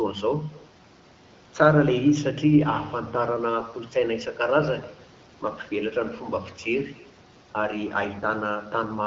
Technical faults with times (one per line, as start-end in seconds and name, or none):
0.00-9.06 echo with no canceller
3.58-3.78 AMR bit errors
8.10-8.24 AMR bit errors